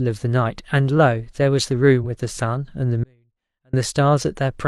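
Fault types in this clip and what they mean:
Damaged data in a compressed stream: a corrupted stretch of the coded stream throws the decoder off sync, giving a brief glitch around 2.0 to 2.02 s.
Audio dropout to a faint residue: the speech cuts out abruptly from 3.04 to 3.73 s, leaving only faint sound roughly 40 dB down, likely a lost feed upstream.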